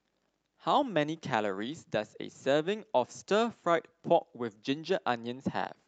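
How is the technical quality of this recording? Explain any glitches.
The speech comes through without any glitches. It has the sound of a call link: the top end stops at around 8 kHz, which fits an Opus call codec at a fairly generous bitrate.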